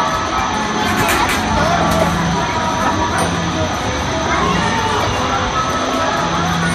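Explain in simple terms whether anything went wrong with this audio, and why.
Nothing went wrong that I could hear; listening carefully, no problem stood out anywhere in the recording.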